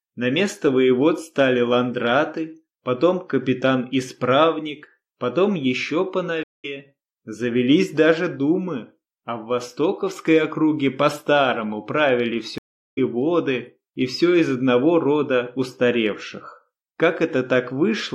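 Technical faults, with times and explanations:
6.43–6.65 s and 12.58–12.99 s, stream reconnect: the connection dropped, giving gaps of about 204 ms and 388 ms while the player reconnected and started a fresh decoder. Playback resumes roughly 0.2 s and 0.3 s further on, so material is skipped.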